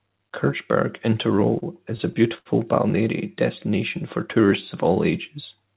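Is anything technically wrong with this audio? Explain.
Yes. From 1.4 to 2.47 s the speech drags and stutters, halting about five times, the longest halt around 74 ms. These are repeated stalls (stutter): packets arrived late, the jitter buffer ran dry, and the receiver stretched the last sound, roughly 133 ms in all, so nothing is lost. The call path's G.711 coding leaves no content above 4 kHz.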